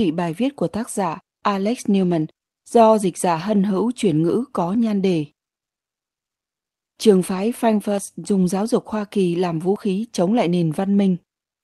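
A likely dropped buffer (overrun), where the capture side failed to collect its samples before the hardware wrote over them, leaves two short gaps spliced shut with no silence. At 7.98 s, just before "dùng giáo dục", the speech jumps ahead by around 20 ms. At 9.76 s, between "làm vũ" and "chống lại", the same skip recurs, clipping a sliver of sound at the join.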